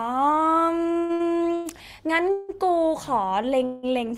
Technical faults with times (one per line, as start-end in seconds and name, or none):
0.97-1.67 repeated stalls (stutter)
2.31-2.51 call audio freeze
3.13-3.60 jitter buffer slow-down
3.65-3.85 call audio freeze